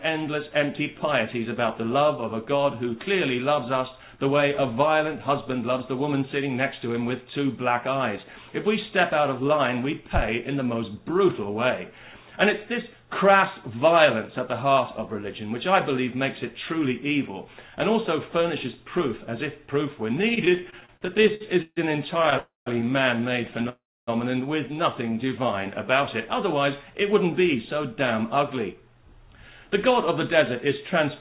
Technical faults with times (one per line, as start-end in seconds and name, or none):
20.12-22.34 repeated stalls (stutter)
22.38-22.68 call audio freeze
23.69-24.09 call audio freeze
27.13-30.67 jitter buffer speed-up